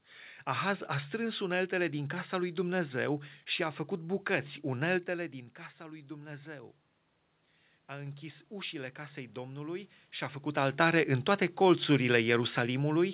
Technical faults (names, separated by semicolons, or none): automatic gain rising